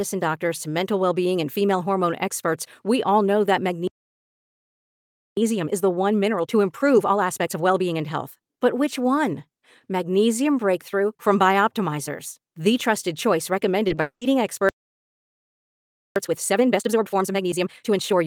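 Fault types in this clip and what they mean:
playback stall: 3.87–5.37 s after "we all know that", and 14.69–16.16 s; speech halts for about 1.5 s each time, likely the player starving for data or being blocked.
time-compressed catch-up: 5.37–8.37 s at 1.25x, and 16.16 s to the end at 1.5x; the player trims its backlog with small cross-faded cuts, so speech hurries at normal pitch.
short concealed packet loss: 13.87 and 13.95 s, just after "the trusted choice"; two 20 ms holes are bridged by extending the previous sound, heard as brief smears or wobbles.
long network dropout: 14.01–14.23 s; about 200 ms is filled with a fading continuation of the last sound, then roughly 100 ms of silence, likely from a stretch of missing network audio.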